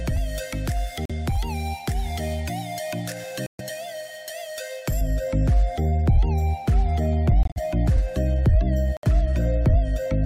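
At 1.05 s the sound drops out abruptly for 56 ms. This is a corrupt frame muted. Damaged compressed data was rejected by the decoder, and silence was put in its place. The gap fits a loss of about two frames. At 3.46 s a longer hole of 144 ms follows, which points to roughly six frames. Each gap starts with a hard cut, and the timing carries on unchanged afterwards.

From 5.01 s to the end, the tone turns dull and muffled. This is de-emphasis applied wrongly. A treble cut meant to undo pre-emphasis was applied to audio that did not need it. The response slopes smoothly downward, sitting about 11 dB lower at 10 kHz than at 1 kHz. Brightness and air fade, and the sound seems veiled. The muffling lasts through the rest of the clip.

Within that dull stretch, two more muted frames occur. At 7.43 s the sound vanishes for 148 ms, which fits about eight lost frames. At 8.97 s a 78 ms hole follows, pointing to about four frames. 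Both start suddenly, like the earlier ones, and playback resumes on time.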